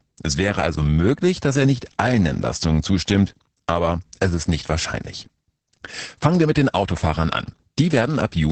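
Opus voice compression runs through the entire clip, and the damage is heavy. The speech has no content above about 8.6 kHz, which points to a wideband limit. The coarse, rasping texture points to the linear-prediction coder working alone at a low rate, around 10 kbps with 20 ms frames. With so few bits, the excitation is coded crudely. As a result, the speech sounds muffled, hoarse and slightly robotic from start to finish.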